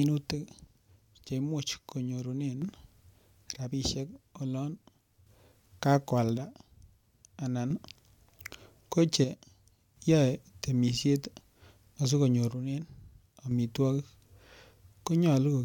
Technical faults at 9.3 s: one channel drops out

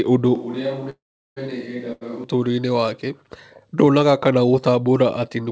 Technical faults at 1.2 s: switch to a distant microphone; call audio freeze

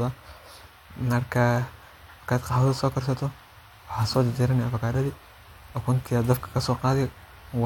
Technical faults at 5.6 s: none

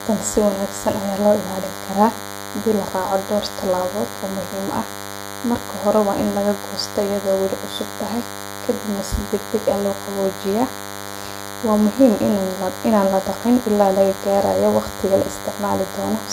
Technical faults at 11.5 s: DECT cordless phone buzz

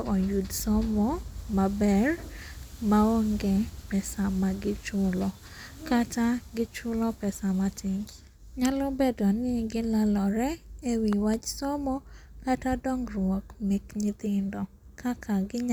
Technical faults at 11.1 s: loud pop

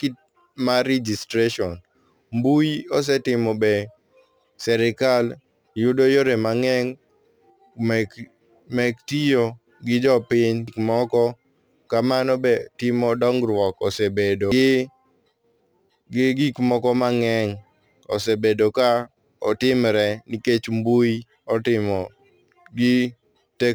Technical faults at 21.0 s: crude rate conversion

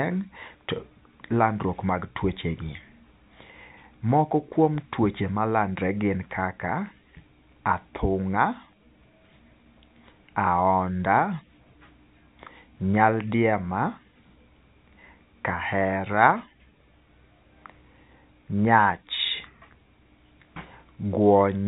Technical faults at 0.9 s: none

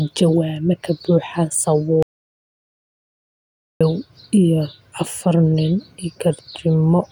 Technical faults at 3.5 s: audio dropout to silence

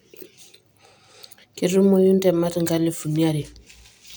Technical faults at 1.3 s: sample clock jitter

